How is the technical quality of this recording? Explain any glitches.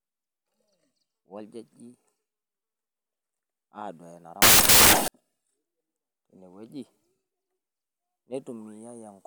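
The recording has one clear fault: samples built from the wrong bytes, from 4.42 to 5.08 s. For about 0.66 s the reader assembled each sample's bytes incorrectly, shifted by a byte or in swapped order, so the rapidly fluctuating low-order bits ended up as the dominant part of every value. The speech there is replaced by loud, harsh noise, close to white on the louder sounds.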